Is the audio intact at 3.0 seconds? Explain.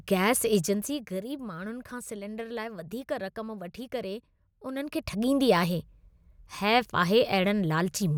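Yes, the speech is intact at 3.0 seconds, with no fault to be heard at that moment.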